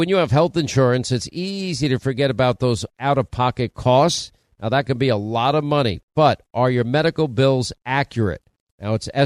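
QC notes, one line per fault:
No technical faults can be heard anywhere in the speech recording; the signal holds steady throughout.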